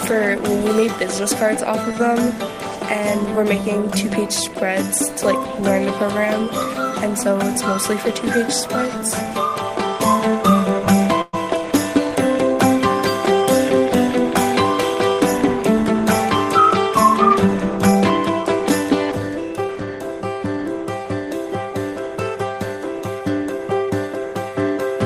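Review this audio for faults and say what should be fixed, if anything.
A held, fading smear at 11.21 to 11.35 s comes from a burst of packet loss. The receiver stretched the last sound, then resumed about 120 ms further on. Adding forward error correction and a deeper jitter buffer on the link would prevent this.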